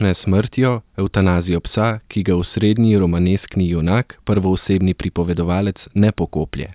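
A listener hears a speech recording with no audible technical faults at any point.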